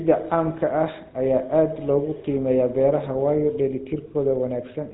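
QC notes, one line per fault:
Throughout: GSM full-rate codec. The speech has a plainly audible buzzy, gravelly roughness because a vocal-tract model is driven by a sparse, regular pulse excitation, which fits a 13 kbps stream. On a spectrogram, energy stops abruptly at 4 kHz, and the harmonics below look grainy and smeared.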